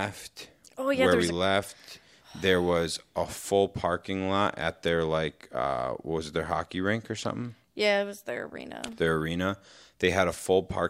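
Speech, interrupted by a burst of loose connector crackle from 8.87 to 8.93 s, about 60 ms in all. A worn or dirty contact is making and breaking as it shifts, so the signal is chopped on and off in rapid, irregular succession, which the ear hears as scratching. On a waveform the burst shows as a ragged cluster of abrupt breaks and jagged spikes; on a spectrogram it appears as a short column of broadband energy.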